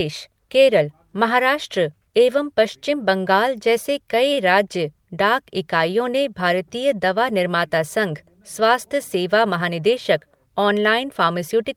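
It's a speech recording with two network-timing glitches. Around 4.33 to 4.40 s there's a short stall from a late packet: the sound is held about 36 ms while the receiver waits, nothing is lost, and the delay grows by 36 ms. Then from 9.61 to 9.94 s comes a jitter buffer speed-up, where the receiver trims short pitch-period chunks, roughly 50 ms in total, so speech runs at 114% speed and sounds hurried without any pitch change.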